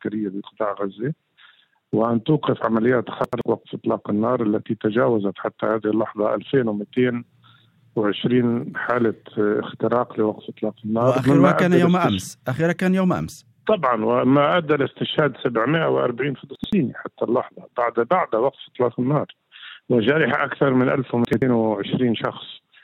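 Chunks out of order at 3.24–3.41 s, 16.56–16.73 s and 21.25–21.42 s: each time an 85.33 ms chunk plays one slot late, after its neighbour. The audio in that span runs backwards in sequence, heard as a brief jumbled stutter, with three hard joins.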